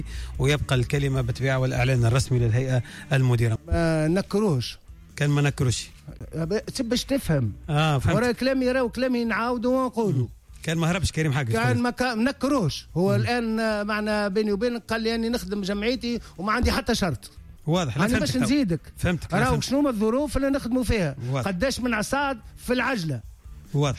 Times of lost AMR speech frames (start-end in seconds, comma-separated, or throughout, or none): none